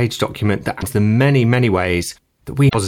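Damaged data in the compressed stream appears at 0.77 to 0.82 s and again at 2.68 to 2.75 s. Each time, corrupted bytes make the decoder misread its frames and lose sync while it hunts for the next valid header, leaving a short glitch in the speech.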